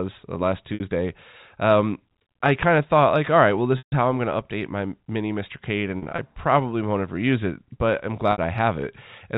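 Speech over a telephone-band G.711 line, with four dropouts from packet loss with pitch repetition. At 0.74 s, after "uh last", 60 ms briefly buzzes. At 3.78 s, after "like all right well", 140 ms fades toward silence. Scattered 100 ms of gaps follow from 5.98 to 6.18 s, before "probably won't ever use". Another 60 ms buzz comes at 8.32 s. In each, the receiver loops the last pitch period to fill the missing audio.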